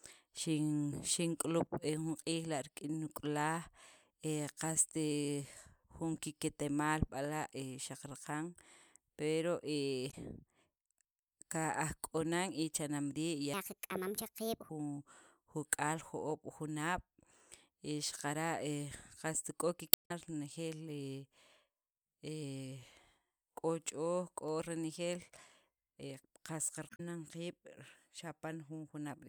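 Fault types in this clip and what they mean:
Damaged data in a compressed stream: Some of the encoded frames got corrupted, so the decoder chokes on them, loses its place and has to hunt for the next valid frame header before it can pick the speech back up. Here you get three short, harsh glitches rather than clean audio, at 10.07 to 10.14 s, 19.90 to 20.11 s and 26.86 to 27.00 s. The middle one, at about 0.2 s, is the longest of the three.
Section at the wrong speed: From 13.54 to 14.69 s the speech suddenly runs 1.4 times too fast, so it sounds rushed and squeaky, pitched up by around five semitones, then drops back to normal. Because pitch and tempo jump together and only for that stretch, the likely cause is that chunk being played or edited against the wrong clock rate, rather than anything the talker actually did.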